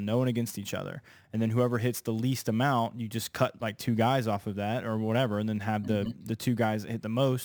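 Throughout the speech, imaging from sample-and-hold upsampling adds a bright metallic fizz about 24 dB below the voice, pointing to a roughly 22 kHz original rate. On a spectrogram, a mirrored copy of the speech spectrum fills 11 to 22 kHz; the waveform shows small staircase steps.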